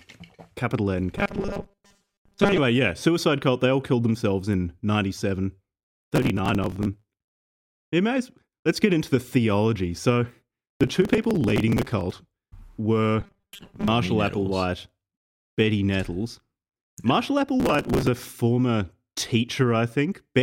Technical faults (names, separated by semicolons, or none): robotic sound from repeated short buffers; processor overload crackle